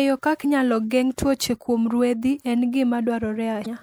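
A speech clip with damaged data in a compressed stream, heard twice. Brief glitches occur from 0.41 to 0.45 s, just before "inyalo geng' tuoche kuom", and from 3.62 to 3.66 s. Corrupted bytes made the decoder misread those frames and lose sync before finding the next header.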